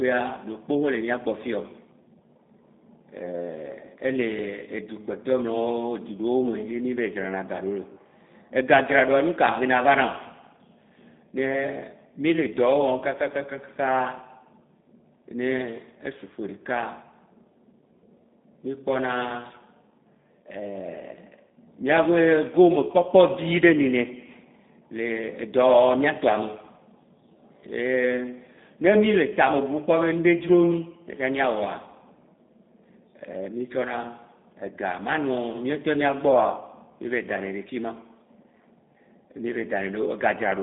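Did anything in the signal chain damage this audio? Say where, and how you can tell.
Yes. The damage is at the codec stage: the whole speech clip carries G.729 coding. Nothing survives above about 3.8 kHz, the line band runs roughly 200 Hz to 3.7 kHz, and the speech sounds plainly rough and synthetic. This fits an 8 kbit/s pulse-excited model resynthesising the voice.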